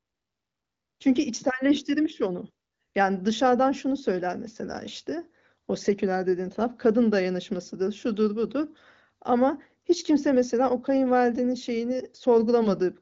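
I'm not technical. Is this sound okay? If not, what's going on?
Yes, nothing here sounds wrong.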